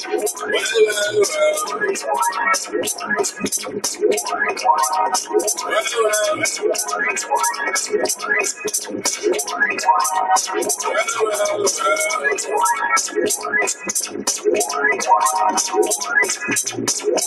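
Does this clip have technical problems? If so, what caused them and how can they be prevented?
Yes. A noise suppressor applied to music or sounds runs through the whole clip. A suppressor built for speech treats steady tones, ambience and reverb as noise, so it keeps pulling the level down and letting it back up by around 10 dB. Onsets pass, but sustained parts and tails sink, and the audio pumps and thins. To prevent it, switch off or bypass speech-oriented noise suppression when capturing anything other than speech.

Sound cut by the noise suppressor is clearest at 0.33–0.49 s, 2.65–3.13 s, 3.61–4.02 s, 8.83–9.25 s, 13.37–13.52 s and 14.06–14.46 s. In each stretch the suppressor judged the sound to be noise and attenuated it harder than its surroundings, by about 10 dB at worst (about 9 dB at 8.83 s, about 8 dB at 13.37 s). Each dip lasts from a brief instant to roughly a third of a second. 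To prevent it, disable the suppressor or use a mode designed for music.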